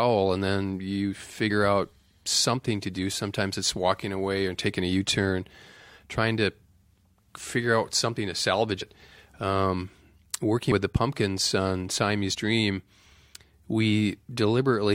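Compressed frames skipped at 1.49 s, 8.80 s, 10.71 s and 12.31 to 12.35 s. Whole compressed frames never reached playback, so the speech lurches forward: roughly 50 ms vanishes between "and then you" and "out something to do", about a tenth of a second after "figure out something to", around 70 ms before "with the", and roughly 50 ms at 12.31 s.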